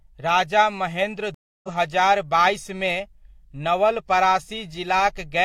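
After "राजा महेन्द्र" the speech drops to silence for 0.29 s, from 1.34 to 1.69 s, then resumes at "हजार बाइसमे" roughly 0.3 s further on. This is a stream reconnect: the connection broke, and the player restarted its decoder mid-stream at a later point.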